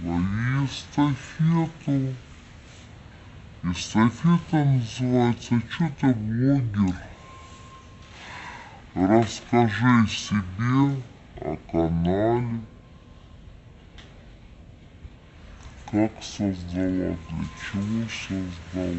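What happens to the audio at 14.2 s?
At 14.2 s you're still hearing stereo read as mono, which runs the whole clip: interleaved left-right samples play as one channel, so everything's at half speed and an octave low.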